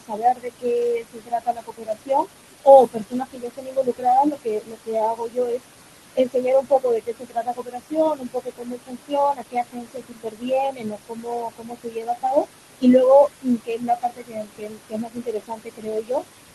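The noise suppressor artifacts run the whole way through. The suppressor is pulling the room noise down by about 21 dB, frame by frame. That noise sits only about 11 dB under the speech, so the suppressor is working hard, and you can hear it: the background drops away in the gaps and swells back up under the talking.

The other problem is speech cut by the noise suppressor, which happens six times: 0.00 to 2.28 s, 2.86 to 4.07 s, 4.24 to 5.63 s, 6.15 to 9.16 s, 9.33 to 12.48 s, and 13.28 to 16.25 s. In each stretch the suppressor mistakes quieter parts of the speech for noise and ducks them, by about 22 dB at worst. Somewhere between one and three seconds per stretch gets hit, so soft consonants and word endings sound swallowed or faint, almost as if they'd been gated out.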